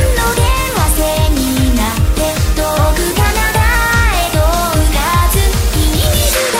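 From 3.12 to 3.75 s the sound briefly runs fast and goes sharp by nearly a semitone, about 94 cents, then snaps back to normal. This is likely a drift correction step, where clock-matching software jumped the playback rate by roughly 5.6% to rebalance its buffer.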